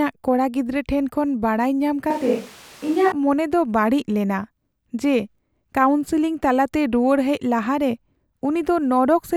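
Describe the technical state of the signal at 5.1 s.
At 5.1 s the speech signal is intact, with no audible fault at that moment.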